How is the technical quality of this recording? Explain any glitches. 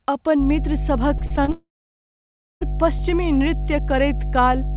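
The recording has three clear faults. A loud hum sits under the speech for most of the clip, and a burst of choppy, robotic breakup leads straight into a dropout lasting more than a second. The audio stops at 4 kHz, which fits a narrowband telephone codec such as G.711 at 64 kbps.

From 0.38 s to the end at about 5 s, a steady low drone runs beneath the speech. This is mains hum at 50 Hz, and it is strong: roughly as loud as the speech, only a few decibels below it. The usual cause is a ground loop or a nearby transformer feeding the power-line frequency into the signal path. Once that happens, the tone stays locked in place whatever the talker does.

Between 1.18 s and 1.50 s the speech turns choppy and metallic. This is repeated packet loss, and it produces the robotic sound. Four short holes open in quick succession, the longest about 37 ms, and together they cover roughly a third of that stretch. 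The receiver patches each hole by stretching the last bit of sound it received. Because each patch is followed almost at once by the next gap, the speech comes out buzzy and fragmented.

At 1.52 s the audio cuts out and does not return until 2.63 s, so about 1.1 s of speech is lost. At first a brief smeared continuation of the last sound fades away. After that comes close to a second of silence, with only the hum still present. The likely cause is a long network dropout: no packets arrived for that whole span, so the receiver could only extend and then give up. When the audio resumes, the missing part is simply gone.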